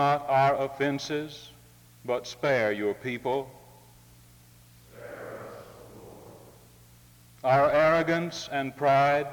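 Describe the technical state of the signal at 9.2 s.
At 9.2 s the signal is intact, with no technical fault audible at that point.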